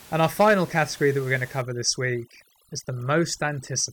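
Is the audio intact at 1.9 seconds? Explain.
No, 1.9 s falls inside a stretch of overdone noise removal running from 1.62 s to the end. Over-aggressive gating of bands near the room-noise floor leaves twinkly near-silence.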